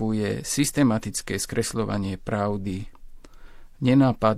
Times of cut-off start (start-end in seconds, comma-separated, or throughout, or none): none